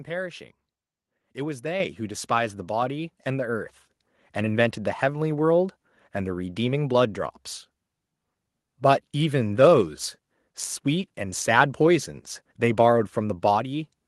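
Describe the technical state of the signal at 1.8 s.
At 1.8 s the microphone volume is stepped up: the input level jumps by about 6 dB in one instant. Voice and background rise together, which separates this gain step from a speaker leaning closer or a gradual AGC ramp.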